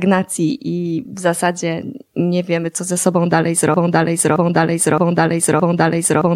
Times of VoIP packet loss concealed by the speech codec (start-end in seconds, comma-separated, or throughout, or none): none